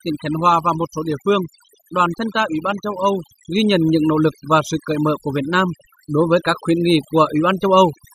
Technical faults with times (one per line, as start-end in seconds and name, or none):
0.00-8.14 overdone noise removal